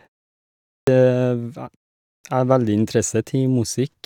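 At 0.83 s and again at 2.20 s, after pauses of about 0.8 s and 0.5 s, a clipped start after a pause swallows roughly 43 ms and 39 ms as the sleeping output wakes. Speech bursts abruptly from silence, and the waveform shows a hard-edged onset with no rising attack.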